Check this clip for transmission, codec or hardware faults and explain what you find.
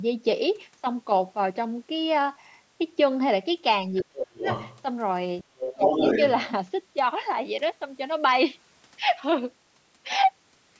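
Two faults are audible in this speech, both tied to echo cancellation during double talk. The band tops out at 8 kHz, consistent with call microphone processing.

Speech suppressed in double talk occurs from 3.90 to 4.47 s and again from 5.74 to 5.90 s. The talker's level drops by around 30 dB and then 25 dB, affecting roughly 0.4 s and 0.15 s. The likely cause is the echo canceller ducking everything while both sides spoke at once.

The other side's voice leaks through from 3.98 to 4.05 s, 4.39 to 4.83 s, and 5.41 to 6.29 s. It rises from about 20 dB below the talker, to about 10 dB below, to roughly equal level. This is likely loudspeaker echo that the canceller failed to remove, heard as a second voice.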